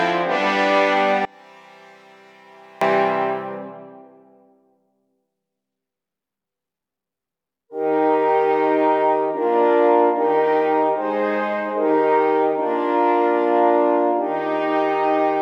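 From 1.25 to 2.81 s the sound collapses to a faint residue, roughly 28 dB quieter, before returning at full strength. The likely cause is one channel inverted: with one side's polarity reversed, everything shared between left and right cancels when the two are summed, leaving only their small differences. On a waveform the segment shrinks to a thin sliver between two full-height sections. A spectrogram shows the same span darkened across the band.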